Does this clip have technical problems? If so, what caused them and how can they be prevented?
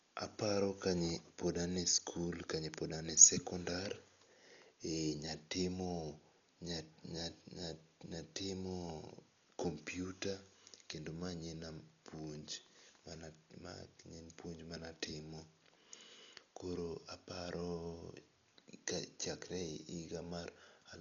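Yes. Throughout, the speech sounds dull with nothing above 7 kHz and a rough, fluttering noise around voiced tones, likely from heavy Dolby Digital compression at a rate fitting about 48 kbps. Starved frequency lines get filled with dither noise, a grainy hiss unlike MP3's watery swirl. Encoding at a higher bitrate prevents this.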